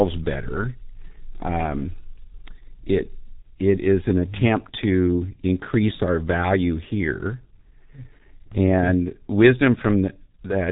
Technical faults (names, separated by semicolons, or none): G.723.1 codec